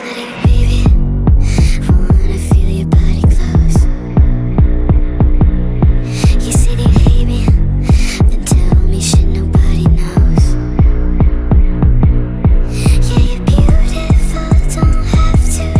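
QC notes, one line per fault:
No technical faults can be heard; the signal stays continuous throughout.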